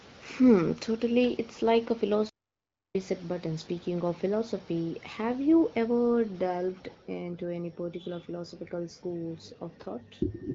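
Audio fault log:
2.29 to 2.95 s, playback stall: the player likely ran short of buffered data or had its output thread held up, so the speech breaks off mid-flow into silence for 0.65 s, then resumes.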